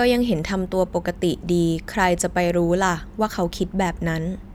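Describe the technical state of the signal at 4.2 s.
At 4.2 s the signal is intact, with no audible fault at that moment.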